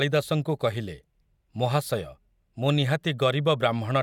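Nothing goes wrong anywhere in this bit of speech, so there's no fault to point to at any moment.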